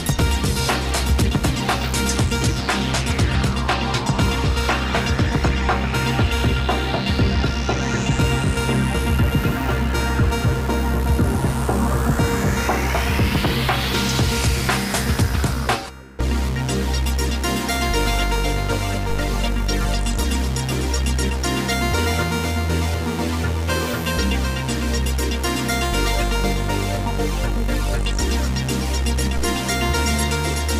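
Two DC steps, at 19.1 s and 29.37 s, each land as a low thump while the sound carries on unchanged. The waveform's zero line jumps by about -18 dBFS and sags back over a fraction of a second, consistent with a 2 Hz high-pass, and the spectrogram shows a brief broadband low-frequency smear.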